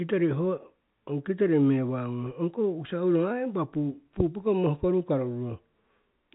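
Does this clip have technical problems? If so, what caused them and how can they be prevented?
No, this clip has no technical problems, so there is nothing to prevent.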